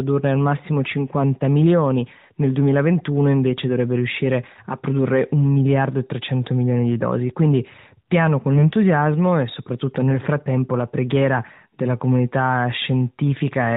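Right after "piano con", from 8.54 to 8.75 s, the speech turns hoarse and scratchy with a gargling edge while keeping roughly its pitch and loudness. These are AMR bit errors: over this stretch, eleven 20 ms frames, a few percent of the codec's less protected bits arrived flipped. The frames still passed their checksum and were decoded, so the excitation pulses landed in the wrong places and the fine pitch, gain and spectral values came out wrong. The surrounding AMR narrowband sound stays band-limited below 4 kHz.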